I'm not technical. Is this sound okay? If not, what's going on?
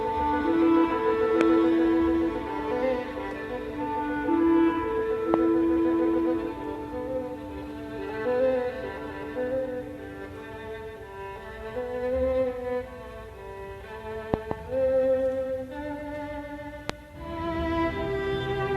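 No. Sudden electrical jolts, likely from a plug, switch or static, caused a loud pop at 1.41, 5.34 and 16.9 seconds, and a quick double pop from 14.34 to 14.53 seconds.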